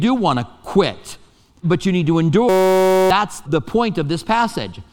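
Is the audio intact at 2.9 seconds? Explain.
No. From 2.49 to 3.10 s a system hang loop replaces the audio: the system stalled while the hardware kept replaying one 5.33 ms stretch, which fits a 256-sample buffer. The result is a steady 188 Hz buzz, and roughly 0.7 s of real audio is lost. Unlike hum, it starts and stops abruptly with the freeze.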